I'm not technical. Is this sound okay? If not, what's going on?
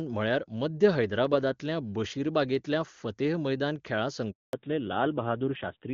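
No. At 4.31 s, right after "मैदान खेळा", the speech cuts out for about 0.22 s and then resumes. This is a handover gap: the phone switched the call to a different network, and nothing reached the listener during the switch, so whatever was said then is lost.

From 4.53 s to the end, the speech sounds duller and rougher than the clear HD Voice before the gap. This is a fallback to narrowband: the new connection uses an older, lower-quality codec that drops all sound above 4 kHz.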